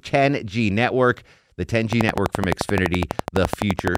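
From 1.93 s to 3.96 s the speech is overlaid by a train of clicks: around thirty sharp ticks at a steady 11.8 per second, each standing roughly 20 dB above the speech. The likely cause is interference or a faulty connection or power supply injecting a pulse at a fixed rate. On the waveform they appear as evenly spaced narrow spikes. A spectrogram shows them as thin vertical lines running the full frequency range, continuing through pauses.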